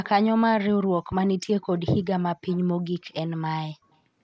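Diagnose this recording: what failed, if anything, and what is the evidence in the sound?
Echo leak at the call-processing stage: a faint, delayed copy of the speech trails the original at 0.04 to 0.09 s, 1.61 to 1.8 s, 2.47 to 2.6 s and 3.92 to 3.98 s. It sits roughly 25 dB down, and nearer 40 dB down in the last scrap. The delay is a fixed 146 ms. Room reverberation would give a smeared, decaying tail, but this is a discrete repeat, most likely a far-end loudspeaker's output that the echo canceller failed to fully remove.

Loud pop in the analogue or driver path: a single sharp transient from 1.12 to 1.15 s peaks a few decibels above the surrounding sound, and the speech carries on beneath it. Because the signal continues, this is not a dropout or buffer gap, and the burst is too brief and isolated to be clipping. It is most likely a voltage step from a connector, switch or static discharge, shaped briefly by the downstream circuitry.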